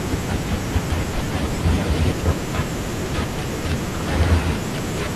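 No technical faults can be heard anywhere in this speech recording.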